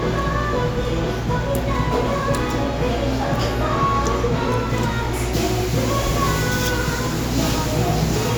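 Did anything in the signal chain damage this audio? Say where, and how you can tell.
No, nothing in the signal chain audibly damaged this audio.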